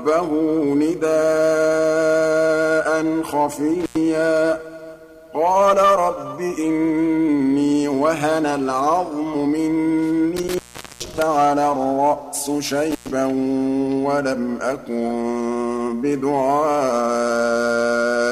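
Intermittent contact at 3.80 s (open 95 ms), 10.37–11.22 s (425 ms) and 12.91–13.10 s (105 ms): a loose connection breaks the signal, crackling at each edge and leaving faint hiss, not the clean silence of a digital dropout.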